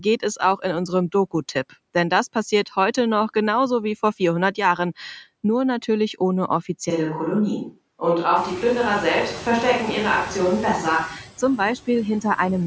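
A speech recording with noise suppressor artifacts throughout. The suppressor pulls down whatever it judges to be steady noise by about 17 dB, frame by frame, so the background drops away in the gaps between phrases and comes back up underneath the speech. From 6.90 s to 11.26 s the sound turns roomy and hollow, with less low end, and then snaps back just as abruptly. This is most likely a switch to a distant microphone, with a farther pickup standing in for the close one during that span. The level changes little across the switch, and its own background noise stays low. Partway through that section, around 8.5 s, the room's background noise rises by about 24 dB to sit about 16 dB under the speech. Throughout, the band stops at 8 kHz, as the call's microphone processing would produce.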